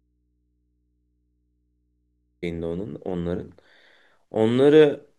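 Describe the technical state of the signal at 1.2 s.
At 1.2 s the signal sits inside an audio dropout to a faint residue, a gap already under way when the clip opens and lasting until 2.43 s. The speech is missing, yet the path after the break stays live, so the gap holds only mains hum, roughly 50 dB below the normal speech level. This is likely an interruption upstream with the input left open, and the speech returns abruptly at 2.43 s rather than fading back in.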